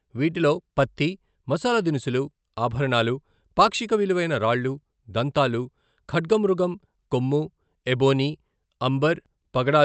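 No technical faults are audible in this recording.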